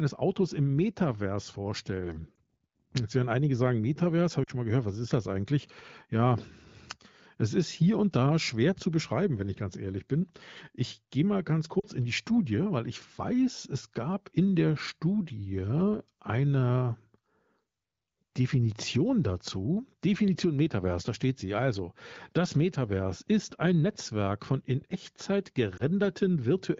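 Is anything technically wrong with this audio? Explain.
Yes, there are lost AMR speech frames at 2.36 s, 4.43 to 4.50 s (just before "schon mal gehört was"), 11.79 to 11.86 s (between "gehe mal ganz" and "in die"), and 25.77 to 25.83 s. The decoder bridges each gap, consistent with one or two 20 ms frames, by repeating the last good pitch and vocal tract settings at falling gain. This produces a brief dip or warble, visible as a short smeared, fading patch in the spectrogram and a small amplitude sag in the waveform.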